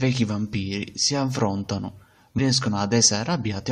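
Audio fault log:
2.38 s damaged data in a compressed stream: a brief glitch in the speech where corrupted bytes make the decoder misread a frame and lose sync until it finds the next frame header. On a spectrogram it shows as a thin vertical disturbance, and on the waveform as a brief, out-of-place discontinuity.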